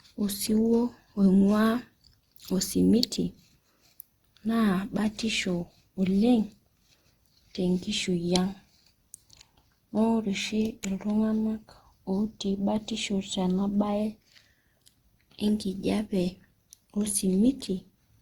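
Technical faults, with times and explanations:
throughout: generation loss. The speech is swirly, smeared and hollow, with blurred attacks, worse than one Opus pass around 64 kbit/s would sound. It was likely re-encoded about ten times, each pass re-quantising on a shifted frame grid, so noise stacks up.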